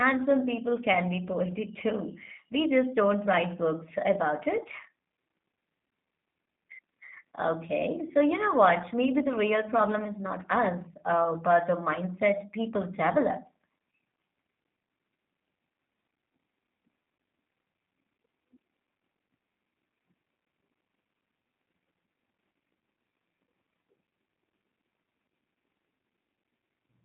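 From start to finish the speech passes through a G.729 codec, which fits an 8 kbit/s stream. Only about 200 Hz to 3.7 kHz survives, leaving it muffled, rough and synthetic.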